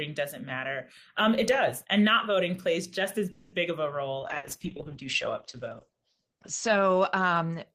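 From 3.31 to 3.55 s there is a call audio freeze: the sound stalls and the last fragment is stretched into a fading sound for about 210 ms, then the speech carries on exactly where it halted. This is most likely the jitter buffer running dry while packets were delayed in transit. What separates it from packet loss is that nothing is skipped. The speech is simply pushed about 210 ms later, with no jump in the flow.

At 4.21 s a call bitrate drop sets in and lasts to the end of the clip. The speech turns coarse and watery, and the top end collapses from a full band reaching about 20 kHz to one cut off near 8 kHz, so the voice sounds muffled. The degradation points to the encoder falling from roughly 32 kbps to about 9 kbps, and it stays at its worst for about 2.2 s. Unlike a brief dropout, this is a sustained change in tone and texture rather than a gap.

Inside that degraded stretch, from 4.37 to 4.46 s, a burst of packet loss produces a short held fill that fades over about 60 ms. 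The speech then resumes further on, so about 60 ms of material is missing. Unlike the earlier freeze, which only delays the speech, this one skips part of it.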